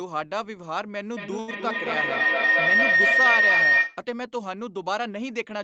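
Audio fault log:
1.17 to 4.05 s, feedback howl: the mic-to-speaker loop gains on each trip, so a tone near 2 kHz builds, the loop repeating about every 200 ms and peaking about 9 dB over the speech.
1.39 to 1.51 s, short stall from a late packet: the jitter buffer ran dry, so the last sound is held for 85 ms until the packet turns up. Nothing is lost.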